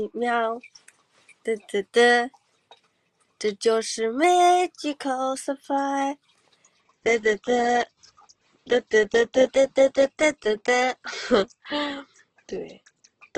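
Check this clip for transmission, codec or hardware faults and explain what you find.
Two kinds of fault are present: a pitch-and-speed jump that occurs twice, and a switch to a lower-quality stream that lasts to the end.

From 4.24 to 5.35 s and again from 9.46 to 11.04 s, the audio runs about 5.7% fast and rises about 95 cents, close to a semitone, then snaps back. This is likely a drift correction step, where clock-matching software briefly changes playback rate to rebalance its buffer.

From 6.81 s onward the sound abruptly loses its treble, with nothing above 8.1 kHz, and codec artefacts increase without any gap. This is an adaptive stream at a lower bitrate. The sound fits a drop from roughly 64 to 12 kbit/s Opus.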